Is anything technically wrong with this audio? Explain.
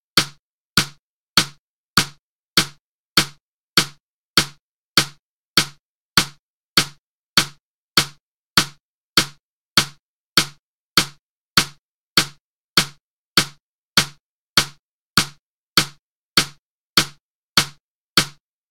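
No, nothing here stands out as a technical problem, so there's nothing to flag.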